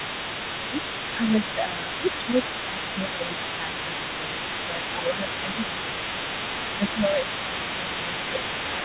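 A second talker can be heard under this speech recording from start to finish, sitting roughly 10 dB below the main voice. This is other-side leakage, a residual echo the canceller failed to remove. The likely cause is that the far end's audio played over the talker's loudspeaker and was picked up again by the microphone. The leaked voice stays audible through the whole clip rather than appearing only in brief scraps. The main voice is also repeatedly pushed down while both sides talk at once, which is speech suppressed in double talk. The first dip is brief, at 0.71 to 0.77 s. A long stretch from 1.12 to 6.24 s has about 3 s of it in total, and another from 6.78 to 8.44 s has about 1 s. At its deepest the voice drops by around 10 dB. The echo suppressor likely cannot tell the near talker from the loudspeaker echo, so it attenuates both. The whole recording is band-limited with nothing above 4 kHz, which fits a narrowband G.711-type call codec.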